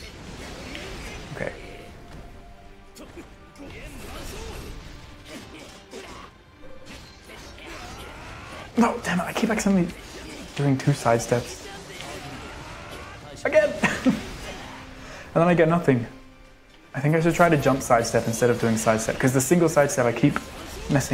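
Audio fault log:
3.67 s, skip ahead: The sound jumps forward with essentially no gap, losing about a second and a half. That stretch was dropped while later audio was already queued, so the two sides of the jump butt straight together.
4.94 to 9.16 s and 9.66 to 10.13 s, jitter buffer speed-up: The buffer was holding too much, so it trimmed pitch-period slices to catch up. Playback runs at 117% and then 110%, hurried but at unchanged pitch, shedding roughly 0.7 s and then a sliver more.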